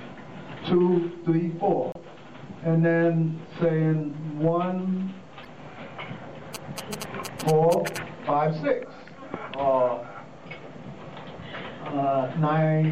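Throughout, the audio has the watery, swirling quality and dulled treble of a likely MP3 compression fault. An encoder short of bits cut off the high frequencies and dropped weak spectral lines frame by frame, and the plainly audible damage fits a low bitrate of around 64 kbps. At 1.92 to 1.96 s and again at 5.43 to 5.47 s, damaged data in the compressed stream makes the decoder misread frames and lose sync while it hunts for the next valid header. Each event is a brief chirp or blip of about 40 ms. From 6.55 to 7.98 s, GSM signalling bursts from a nearby 2G phone preparing a connection were picked up and rectified by the audio circuitry. They produce a galloping dit-dit-dit of short buzzes at about 217 Hz, sitting only a little below the level of the main sound.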